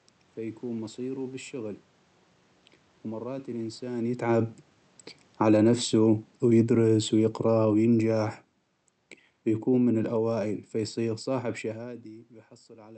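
A speech recording in which the level sinks three times, taking the room noise down with it: by about 3 dB from 5.27 to 5.61 s, about 6 dB from 6.27 to 8.65 s, and about 3 dB from 9.5 to 11.58 s. This is automatic gain falling, as the gain control judges the input too loud or its background noise too strong and gradually turns it down.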